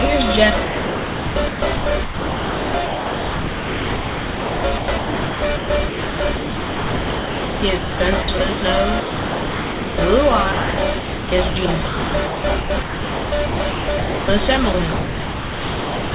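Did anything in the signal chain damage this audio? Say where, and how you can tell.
Yes, at the call-processing stage. The sound is chopped by the voice detector from 0.64 to 8.62 s, 10.52 to 14.28 s, and 14.72 s to the end. It keeps gating in and out, with chunks swapped for comfort noise, likely because the sender's detector misjudged quieter passages.

From 9.0 to 9.98 s the sound is dropped by the voice detector outright. Nearly a full second gives way to steady noise or near silence before the signal returns, likely because the sender decided it was background and stopped transmitting, so the receiver filled the gap with comfort noise.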